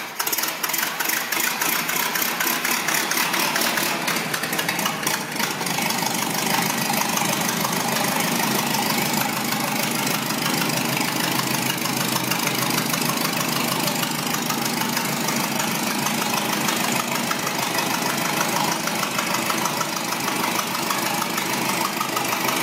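No technical faults are audible.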